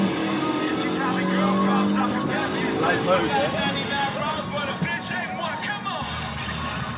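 No technical faults are audible.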